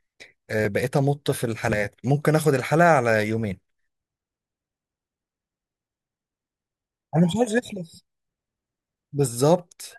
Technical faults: dropped buffer (overrun)

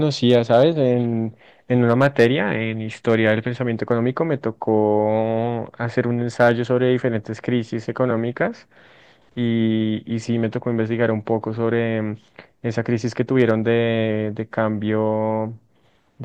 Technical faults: hard clipping

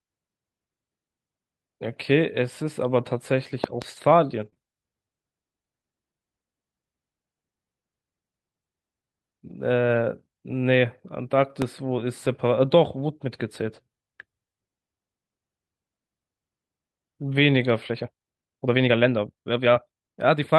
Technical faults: loud pop; lost packet rebuilt from error correction; short concealed packet loss; time-stretched section

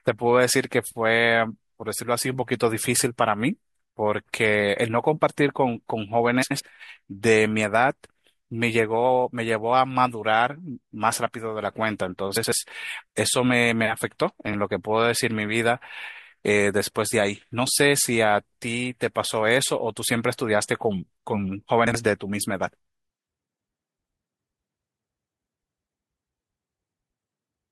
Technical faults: frames out of order

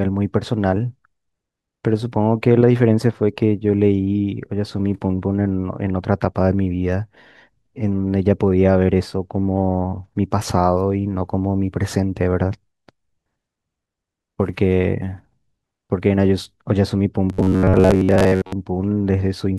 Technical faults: robotic sound from repeated short buffers

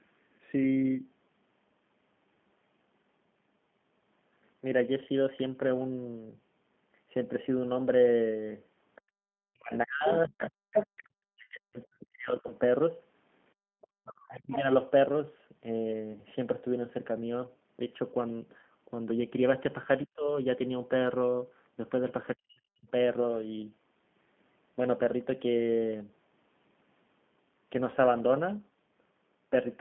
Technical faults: G.729 codec; other side's voice leaking through; background gated by the echo canceller; speech suppressed in double talk; VoIP packet loss concealed by the speech codec

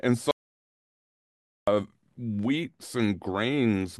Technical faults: audio dropout to silence

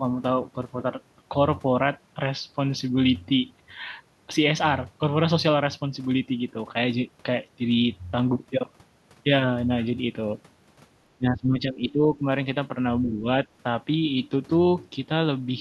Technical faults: speech suppressed in double talk

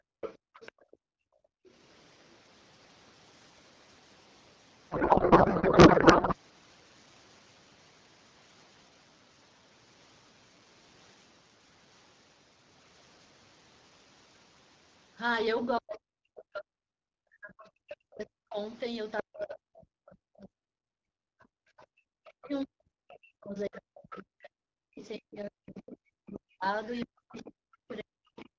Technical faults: background gated by the echo canceller; other side's voice leaking through; codec payload misread; speech suppressed in double talk

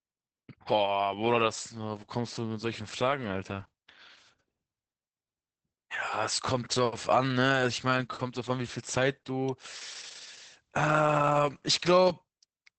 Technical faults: Opus voice compression

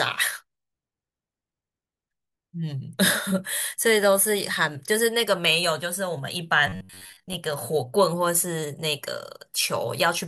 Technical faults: robotic sound from repeated short buffers

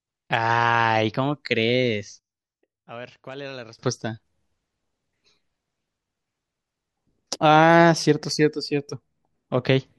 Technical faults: one channel inverted

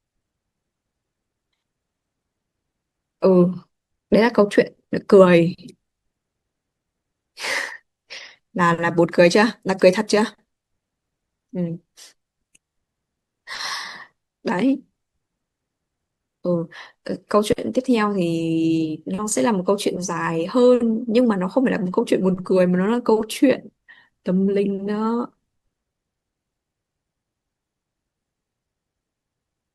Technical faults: none

